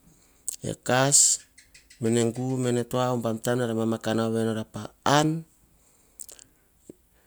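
No technical faults can be heard anywhere in this speech recording. There is nothing here that needs a timestamp or a fix.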